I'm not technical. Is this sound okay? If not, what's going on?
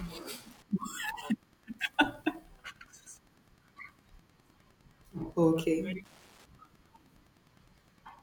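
No. Throughout the speech there is a faint, steady ticking, roughly ten ticks a second, sitting well below the voice. This is Wi-Fi interference. A nearby Wi-Fi radio sends out a short beacon every 102.4 ms, and the audio circuit picks each one up as a click. It differs from mains hum, which is a smooth continuous tone, and from a mobile phone's buzz, which is a harsher, faster chatter. Here each tick stays separate and evenly spaced.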